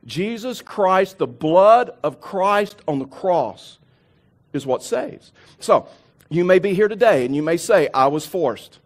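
Time stamps on consecutive stream segments, which fit a 2-second segment length, leave a gap between stream segments that the player fills with silence. This cuts hard-edged holes into the speech at 0.67 s (18 ms) and 2.69 s (12 ms), two seconds apart, without losing any audio.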